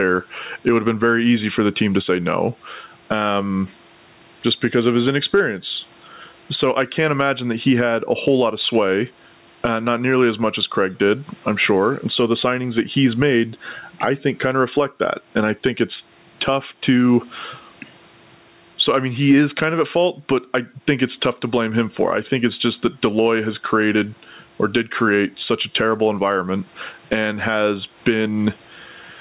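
Throughout the speech, the gain swings about 15 dB, squashing the dynamics. This is gain pumping, likely from input gain set far too high, with a fast limiter clamping every peak.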